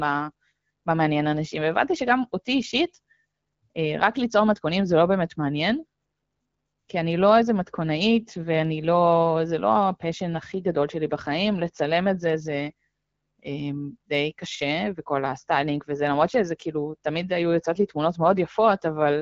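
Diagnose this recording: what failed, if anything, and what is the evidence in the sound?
No failure can be heard.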